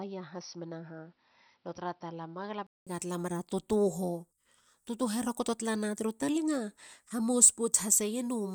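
Speech, with a duller, boxier sound from 0.0 to 2.87 s. Nothing sounds above 5.8 kHz, the level sits about 5 dB lower, and faint new noise sits well below it. A 200 ms silence marks the change. Likely cause: input switched to a poorer device.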